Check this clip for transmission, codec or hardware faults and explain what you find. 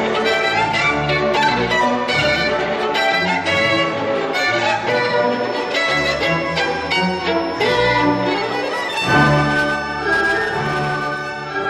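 There's one fault, a feedback whistle. From 4.88 s to the end, a steady 5.3 kHz tone sits around 25 dB under the sound, swelling and fading slowly. It's likely a speaker-to-mic loop ringing just short of a howl.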